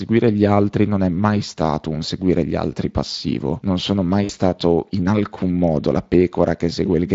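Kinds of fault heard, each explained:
VoIP packet loss concealed by the speech codec: near 4.23 s, about 60 ms of lost speech is stretched into a fading buzzy tone or coloured noise instead of a silent gap, distorting briefly after.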